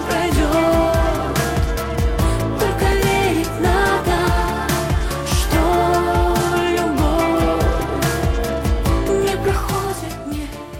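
At 2.92 s there is a repeated buffer. New audio arrived late, so the device played its last block again. The block lasts only 1.45 ms, which fits a 64-sample buffer. It sounds twice with a hard join, heard as a brief click.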